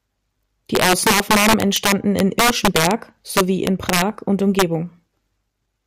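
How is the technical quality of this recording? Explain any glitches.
The recording is damaged by integer overflow at 0.75–2.91 s (about 5 dB over), 3.37–4.02 s (about 3 dB) and 4.59–4.62 s (about 2 dB). Loud speech peaks exceed the integer limit and wrap to the opposite sign, giving harsh cracks. The waveform shows sudden vertical flips to the opposite sign, and the spectrogram shows broadband stripes.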